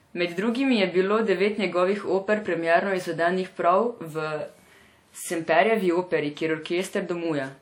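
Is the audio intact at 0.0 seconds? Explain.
No, at 0.0 s the speech already carries the ringing, washy smear and signal-following hiss of likely WMA compression, which runs through the whole clip. Long transform blocks spread quantisation noise over tens of milliseconds, consistent with about 48 kbps, and nothing is left above 18.9 kHz. Unlike steady background hiss, this hiss rises and falls with the speech.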